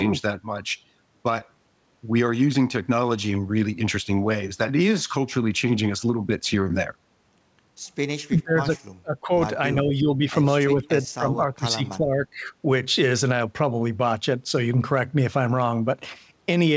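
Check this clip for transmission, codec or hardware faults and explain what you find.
One fault stands out: speech suppressed in double talk, at 8.38–8.76 s, 9.02–9.32 s, 9.74–10.22 s and 10.72–12.48 s. The echo canceller likely treated the overlapping far-end talk as its own echo and turned everything down. The speech dips by about 10 to 30 dB, deepest in the 9.02–9.32 s stretch. The G.722 call path, with nothing above 8 kHz, carries it.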